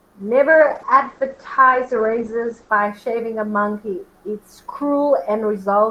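From 0.51 s to 2.77 s, a call bitrate drop cuts the encoder from 64 to 10 kbps for 2.2 s. The speech turns rough and watery. Bandwidth shrinks from 20 kHz to 8 kHz, so a spectrogram shows a flat ceiling at 8 kHz until recovery.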